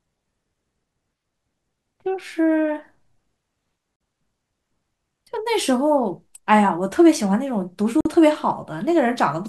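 At 3.96 to 4.01 s and again at 8.01 to 8.05 s, the speech breaks off for about 48 ms, a gap between chunks. The audio was delivered in 4-second pieces and silence was inserted at each join, so the holes fall at a regular 4-second rhythm. Unlike a dropout, nothing is missing: the speech resumes exactly where it stopped, only delayed by the inserted silence.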